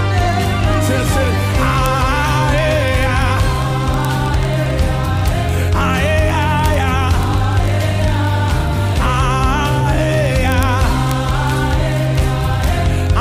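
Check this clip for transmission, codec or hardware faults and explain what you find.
There is one fault: word clock ticks running through almost the whole clip, from 0.12 s to 13.19 s. A digital link is being read on a receiver clock that isn't locked to the sender's, off by roughly a thousand parts per million. Each slip drops or repeats a single sample about every 20 ms. This gives a buzzy, steady run of sharp ticks of uneven strength. On a spectrogram they appear as evenly spaced thin vertical lines, and on the waveform as single-sample jumps.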